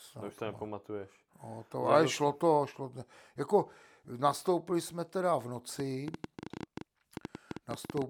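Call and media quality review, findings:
Train of clicks, 5.80–8.03 s, starting right after "nastoupili jsme teda v". Likely interference from nearby equipment or a faulty connection or power supply injecting repeated pulses into the signal path. Result: around twenty similar clicks at roughly 10.4 per second, irregularly spaced, ticking and popping over the speech through to the end. Peaks sit roughly 10 dB above the signal, so the clicks stand out clearly rather than hiding under the speech.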